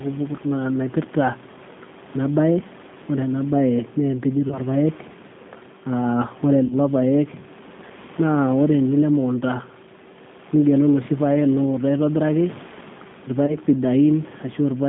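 From start to end the speech carries G.729 codec damage: a narrow telephone band of roughly 150 Hz to 3.6 kHz and a rough, synthetic edge from the 8 kbit/s model. It differs from simple band-limiting by its rough, synthetic, rebuilt texture, audible over room noise about 22 dB down.

VoIP packet loss concealed by the speech codec appears at 4.48 to 4.60 s, 6.66 to 6.76 s and 13.46 to 13.56 s. About 20, 40 and 20 ms of audio were lost, which fits one, two and one 20 ms packets. At each point the decoder stretches the last sound into a fading buzzy tone or coloured noise, and the voice stays weak or distorted briefly after the audio resumes. Unlike a dropout, there is no silent gap.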